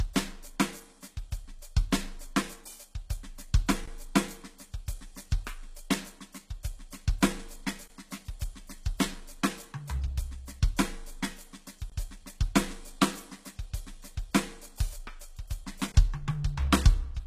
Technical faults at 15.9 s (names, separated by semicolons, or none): HE-AAC compression; gap between chunks